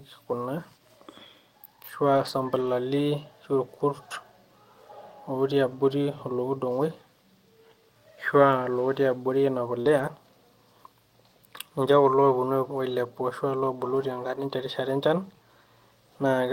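Lost packets rebuilt from error correction first appear from 2.13 to 2.71 s, where about 300 ms of speech turns rough and grainy, which points to a string of 15 separate lost packets. Each was replaced by the low-bitrate backup copy carried in the packet that followed, so nothing drops out, but detail is thinner. The same coarser texture returns briefly at 5.71 s.

Short concealed packet loss follows at 9.81 to 9.87 s. About 40 ms never arrived in time, and the decoder covered the hole by extending the preceding sound, giving a brief smear before it blends back.

Lost packets rebuilt from error correction resume overlapping the end of the concealed gap, from 9.85 to 10.07 s, with roughly 120 ms of grainy, lower-fidelity speech. The same roughening recurs at 11.91 s and again from 12.89 to 12.95 s, where about 40 ms is rebuilt from the backup copies.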